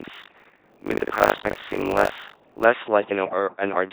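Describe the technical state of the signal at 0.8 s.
At 0.8 s the signal sits inside a buffer tearing span running from 0 to 2.66 s. The writing program and the playback hardware have drifted so they cross mid-buffer, leaving roughly a third of each buffer filled with audio about 70 ms old, spliced in with hard joins. That produces a steady 50 Hz robotic rattle.

Across the whole clip, including this moment, the speech has passed through an LPC-10 vocoder at 2.4 kbit/s. Each instant is rebuilt from a ten-pole filter excited by either a pulse train or noise, so it sounds heavily buzzy and mechanical.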